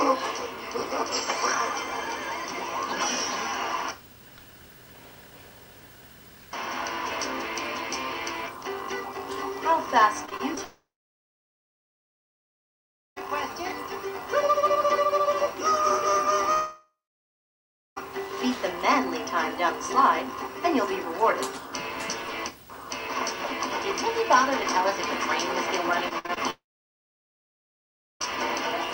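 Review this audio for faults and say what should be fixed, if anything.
Repeated packet loss (robotic sound) at 10.25–10.58 s and 26.08–26.38 s: four brief holes each, patched by repeating sound, giving choppy bursts that keep resuming, unlike a dropout.

Long network dropout at 10.64–13.18 s, 16.52–17.98 s and 26.50–28.22 s: sound fades into a brief buzz, then silence, and returns with the gap's audio missing. The likely cause is a network outage.

To prevent both, stabilise the network path and use a larger jitter buffer with forward error correction.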